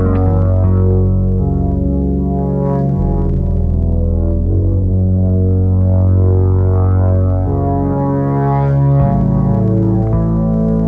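No technical faults can be heard anywhere in this clip. There is nothing to place on a timeline or explain.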